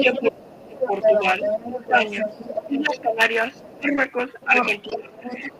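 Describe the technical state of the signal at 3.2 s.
At 3.2 s the echo canceller has likely failed to remove the loudspeaker signal, so the other side's voice is leaking through only slightly quieter than the speech, a fault running from 0 to 3.77 s. The same moment ends a speech-suppressed-in-double-talk episode from 2.66 to 3.2 s, where overlapping talk likely made the canceller turn down the talker's own voice too, causing a deep dip of roughly 20 dB.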